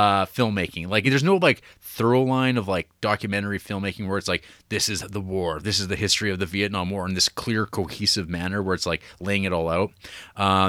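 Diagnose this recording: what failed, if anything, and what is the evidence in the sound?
Nothing in the recording points to a failure at any stage: the speech signal stays continuous and steady in level and timing throughout.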